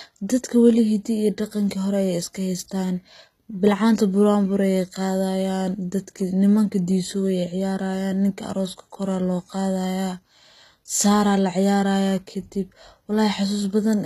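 From start to finish, the speech carries plainly audible codec damage, likely from HE-AAC compression at a very low bitrate, around 20 kbps. The treble is rebuilt from copied lower bands rather than coded, so s sounds turn gritty and lispy, and nothing sounds above about 14.9 kHz.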